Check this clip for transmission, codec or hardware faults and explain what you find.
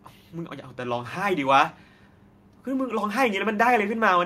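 No faults turn up in the recording. The speech gives no sign of trouble anywhere along its path to the listener.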